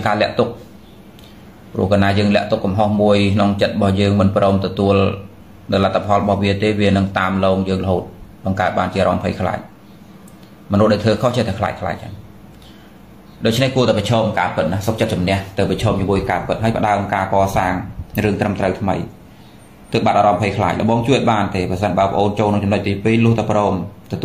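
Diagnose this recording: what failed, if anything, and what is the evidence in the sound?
Nothing failed in this recording, and the sound offers no evidence of a fault at any stage.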